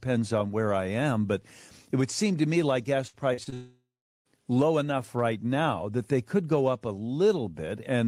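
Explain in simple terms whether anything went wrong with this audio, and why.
Between 3.07 and 3.54 s the speech turns choppy and robotic. This is repeated packet loss: four short gaps, the longest 60 ms, were each filled by stretching the previous sound, so about 140 ms of real speech is missing.

From 3.54 to 4.27 s the sound smears into a fading buzz, then goes silent for about 0.4 s before speech resumes with roughly 0.7 s missing. The likely cause is a long network dropout, where no audio arrived and the gap was papered over.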